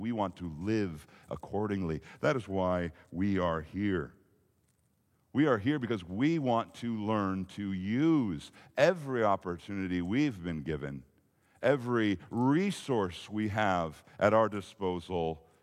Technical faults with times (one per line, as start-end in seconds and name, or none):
none